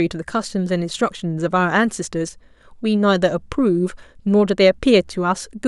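Listening to this speech recording, nothing technical stood out at any point.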